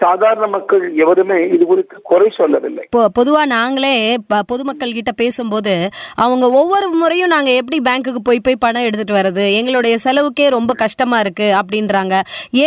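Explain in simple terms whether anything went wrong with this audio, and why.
Nothing went wrong with this audio; there is no fault anywhere in it.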